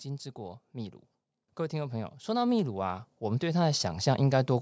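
Automatic gain rising from 1.7 s to 4.56 s in this speech recording: the gain control judged the input too quiet and slowly turned it up by about 12 dB, so the voice and the background noise swell together rather than the voice alone getting louder.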